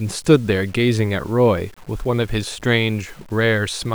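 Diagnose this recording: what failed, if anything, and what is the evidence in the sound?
The fault is low bit depth without dither, present across the whole speech clip. A grainy, signal-following distortion sits roughly 30 dB below the level of the speech, and it gets worse as the speech gets quieter. Word tails and pauses turn gritty or sputter rather than decaying smoothly. The likely cause is a sample-format conversion that truncated samples to about 8 bits without dither, so the rounding error tracks the waveform instead of forming a steady noise floor.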